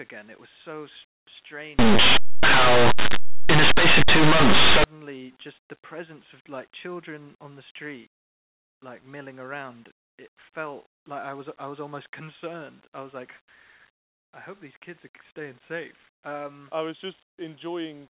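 From 1.79 s to 4.84 s the speech collapses into very loud, harsh distortion, a case of linear audio read as companded: plain linear 8-bit samples are being expanded as mu-law codes, so small values just to one side of zero map to the loudest outputs while the other side stays quiet.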